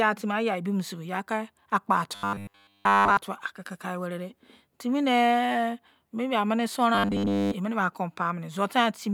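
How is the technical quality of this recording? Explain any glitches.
The speech has two stretches of robotic sound from repeated short buffers. From 2.15 to 3.17 s, and from 6.95 to 7.54 s after "dei timinei maybe ameni", it turns into a rigid metallic buzz at 100 Hz. Audio likely arrived too seldom, so 10 ms chunks looped in place of real signal. This covers the whole first stretch and most of the second.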